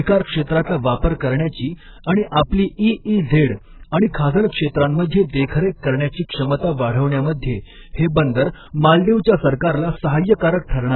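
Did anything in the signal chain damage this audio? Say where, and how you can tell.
Yes, at the codec stage, throughout the speech: nothing above 4.2 kHz, with a heavy warbling, smeared texture on sustained sounds and sibilants. This is likely AAC compression at a very low bitrate, consistent with 8 kbps AAC-LC, which starves the coder and leaves spectral holes. A simple low-pass filter would dull the sound without that warble.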